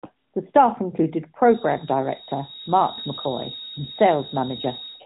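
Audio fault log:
1.40 s to end, feedback whistle: after "staff included", a thin 3.8 kHz tone that slowly swells and fades sits roughly 10 dB under the speech, likely from a loudspeaker-to-microphone loop held just short of runaway.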